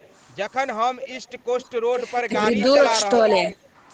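Echo leak appears at 0.0 to 0.14 s, 1.6 to 1.69 s, 1.98 to 2.21 s, 2.56 to 2.63 s and 3.28 to 3.54 s: a delayed copy of the speech trailing it by about 0.42 s. It starts barely audible and grows much louder by the last stretch, likely loudspeaker pickup that the far end's echo canceller failed to remove. Speech suppressed in double talk hits at 2.27 to 2.32 s, where the speech dips by about 15 dB for roughly 50 ms, likely the canceller turning down the talker along with the overlapping echo.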